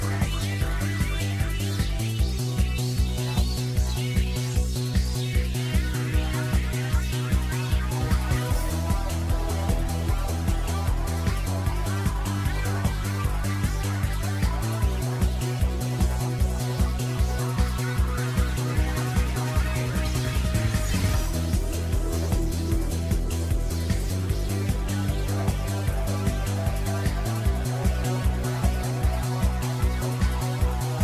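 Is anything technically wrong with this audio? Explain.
No, nothing in the signal points to a technical problem; it holds steady with no audible disturbance anywhere in the clip.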